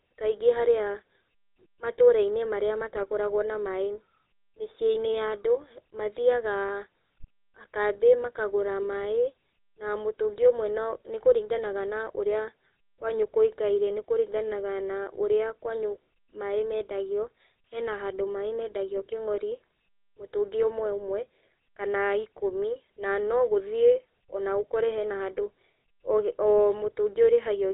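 From start to finish the speech carries GSM full-rate codec damage, plainly audible as a buzzy, gravelly roughness consistent with 13 kbps coding. The excitation is rebuilt from sparse regular pulses, smearing harmonics on a spectrogram, which also shows a hard ceiling at 4 kHz.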